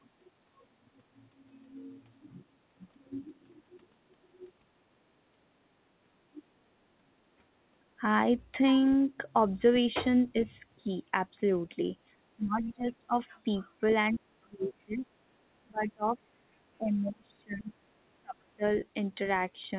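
A speech recording carried over a narrowband call path, with nothing above 4 kHz, which fits G.711 mu-law coding. The talker's level drops in five places, at 10.78 to 10.89 s, 12.36 to 13.15 s, 13.6 to 13.65 s, 14.14 to 15.14 s and 15.64 to 18.64 s. The short ones are dips of roughly 5 dB, and the longer ones go as deep as roughly 25 dB. This is speech suppressed in double talk, likely caused by an echo canceller that could not tell the local talker from loudspeaker echo and attenuated both. At 14.14 to 14.2 s, a brief, faint scrap of the other side's voice leaking through sits roughly 25 dB below the speech, likely as residual far-end echo that the canceller did not fully remove.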